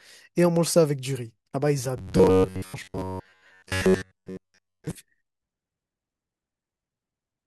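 From 1.97 s to 4.96 s the speech becomes a rigid, metallic buzz fixed at 93.8 Hz that only loosely follows the words. This is likely robotic sound from repeated short buffers: a slice of about 10.7 ms is replayed over most of that stretch while the real audio is skipped.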